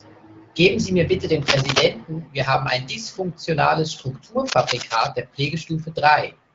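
Cable scratch noise at 1.42–1.83 s and 4.46–5.10 s: likely a worn connector shifting contact, adding scratchy rustling bursts, first near speech level, then somewhat quieter.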